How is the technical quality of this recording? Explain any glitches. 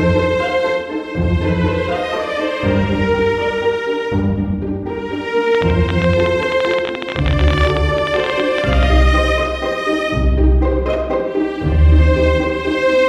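The recording has one clear glitch: a train of clicks from 5.55 to 8.84 s. Something, likely electrical interference or a faulty connection, injects about fifty similar pulses at an irregular 17.1 per second, peaking roughly 15 dB above the sound and heard as uneven ticking over it.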